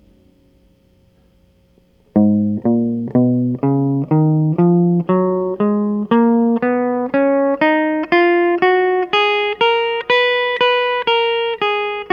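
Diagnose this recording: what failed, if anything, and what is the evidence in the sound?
Nothing failed here; the music runs along with no fault to point to at any stage of the chain.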